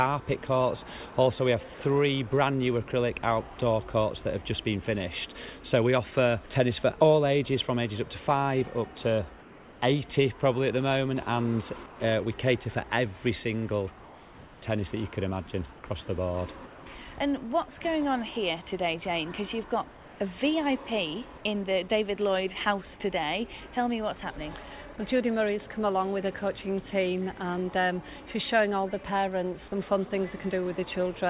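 At 1.74 to 1.80 s there is sound dropped by the voice detector: about 40 ms of real sound is lost, and steady noise or near silence fills the 60 ms gap. The sender's voice detector likely judged the sound to be background and stopped transmitting.

Comfort noise replaces the background at 9.40–9.82, 11.86–12.00, 14.04–14.62, 15.74–15.84, 16.66–16.86 and 19.92–20.20 s. In these pauses, whose background sits about 20 to 24 dB below the loud passages, the real background turns into flat, featureless noise about 2 to 4 dB quieter. This is likely the sender halting transmission while the receiver synthesises filler. The band-limited sound, with nothing above 4 kHz, fits a narrowband call codec.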